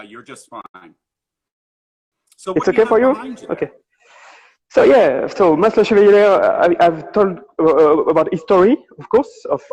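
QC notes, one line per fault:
0.61–1.17 s, repeated stalls (stutter): the sound catches and drags in four short hitches, the longest 80 ms, about a third of this span held in place. Packets arrived late, the jitter buffer ran dry each time, and the receiver stretched the last sound until data resumed, so nothing is lost.
1.48–2.14 s, call audio freeze: the sound stops dead for 640 ms of silence, then picks up exactly where it left off with nothing skipped. This is likely a jitter buffer running empty while packets were held up in transit, inserting a gap and shifting playback later by 640 ms.
7.88–9.71 s, jitter buffer speed-up: the sound turns slightly hurried, running at about 105% speed with unchanged pitch. A backlog of audio had built up in the buffer, so the receiver trimmed many tiny pitch-period slices, about a tenth of a second in all, to bring the delay back down.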